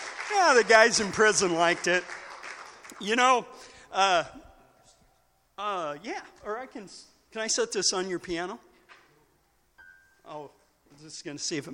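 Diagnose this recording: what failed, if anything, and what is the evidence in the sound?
Nothing failed; no stage shows any audible fault.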